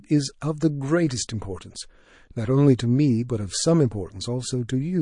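Speech, with MP3 compression audible throughout: watery, swirling treble, dulled sibilants and smeared consonant onsets, likely from encoding at a low bitrate around 40 kbps.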